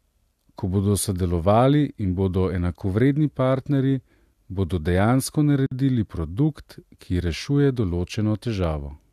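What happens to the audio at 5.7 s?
A gap at a join of encoded pieces runs from 5.66 to 5.71 s. After "bodo dejansko", a 51 ms gap with smeared edges from untrimmed encoder delay and padding interrupts, then "produkt ki rešuje" continues.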